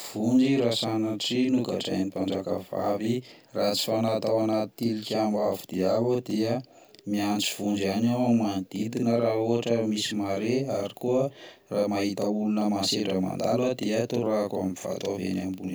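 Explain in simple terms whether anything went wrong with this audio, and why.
The whole clip has a channel delay (doubling) fault: one channel runs 42.7 ms behind the other, which fits a 2048-sample buffer. When both are mixed to mono, you hear the speech twice, like a quick slap echo at equal loudness.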